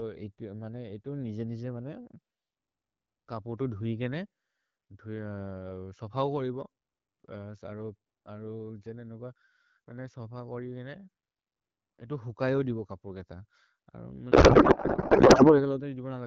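Speech over what sounds like AMR wideband (HD Voice), clear enough to fit the 12.65 kbit/s mode, until a codec payload misread hits from 14.31 to 15.71 s. There the speech turns into garbled noise and warble that barely tracks it, which points to octet-aligned AMR frames being unpacked as bandwidth-efficient ones, so the decoder pulls its parameters from the wrong bit positions. It clears once the packing lines up again.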